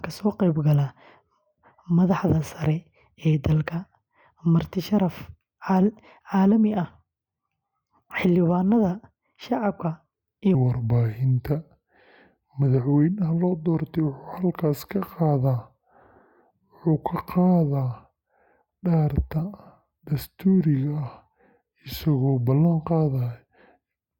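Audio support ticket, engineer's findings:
Section at the wrong speed. Speech from 10.55 s to end of clip. Playback slowed to 0.788x. Pitch drops roughly four semitones together with the tempo, so the voice turns deep and dragging. Abrupt change at onset. Likely cause: editor or player resampling this segment against the wrong clock rate. Speed and pitch remain linked throughout.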